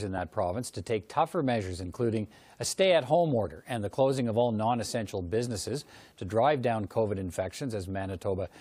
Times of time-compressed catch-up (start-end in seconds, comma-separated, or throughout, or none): none